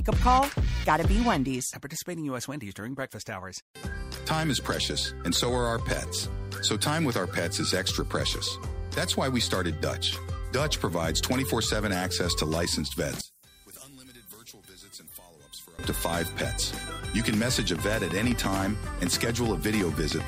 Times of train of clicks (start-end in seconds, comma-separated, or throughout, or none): 17.34-20.21